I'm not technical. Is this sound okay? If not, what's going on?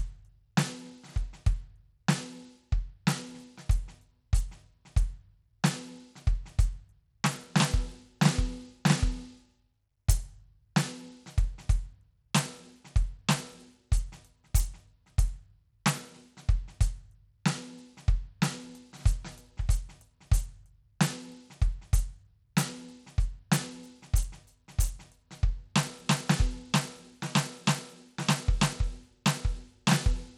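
No. Throughout the music, the treble flickers and drops away under a gritty haze, likely from Bluetooth SBC compression squeezing the sound too hard to transmit.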